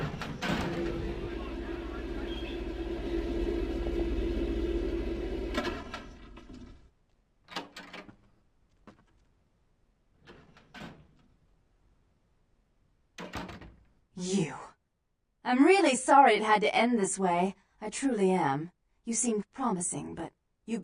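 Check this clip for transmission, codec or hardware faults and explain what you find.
Two short bursts of DAB burbling, from 3.83 to 4.01 s and from 9.77 to 10.01 s. A low residual bit error rate, around 0.15 and 0.07 percent, corrupts MP2 samples and scale factors, so individual sub-bands jump in level frame by frame. The result is short blips of noise in single sub-bands, visible on a spectrogram as scattered, blocky band-limited patches and in the waveform as brief irregular level spikes.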